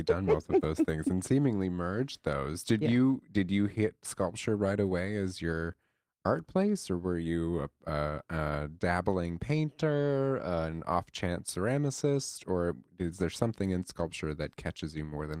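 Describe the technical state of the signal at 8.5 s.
At 8.49 to 8.51 s there is a lost packet rebuilt from error correction. The next packet's low-bitrate copy fills those 20 ms, so the waveform stays unbroken with no gap. The spectrogram shows only a brief, grainier, noisier slice where the rougher reconstruction plays.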